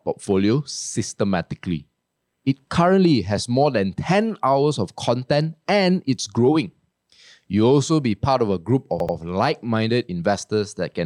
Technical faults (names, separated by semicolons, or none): repeated frames